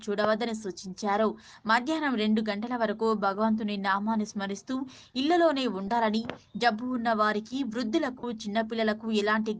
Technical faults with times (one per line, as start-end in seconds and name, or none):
5.87 lost LE Audio frames
8.19-8.24 lost LE Audio frames